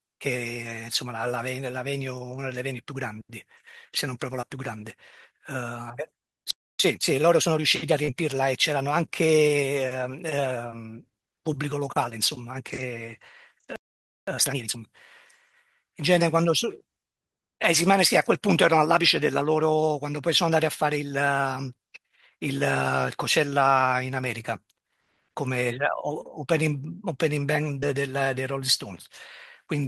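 At 4.41 to 4.45 s, short concealed packet loss: a few hundredths of a second of audio arrived too late for the decoder, so the receiver extended the preceding sound to cover the gap and faded back in. The speech briefly smears. The same brief smear recurs at 8.05 to 8.11 s and 27.80 to 27.88 s.

Between them, at 6.51 s, a playback stall occurs, likely because the player ran out of buffered data or its thread was blocked. The speech cuts to silence for about 0.29 s. At 6.80 s a time-compressed catch-up begins, in which the player trims its backlog by cutting and cross-fading small slices. Until 7.94 s the speech runs 1.25 times fast at unchanged pitch.

A second playback stall at 13.76 s silences the sound for about 0.52 s. A harsher catch-up follows from 14.28 to 14.78 s at double speed, clearly rushed.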